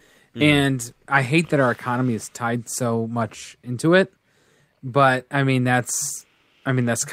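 No technical faults are audible.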